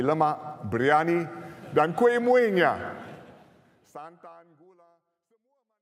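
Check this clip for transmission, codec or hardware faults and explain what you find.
No transmission, codec or hardware faults.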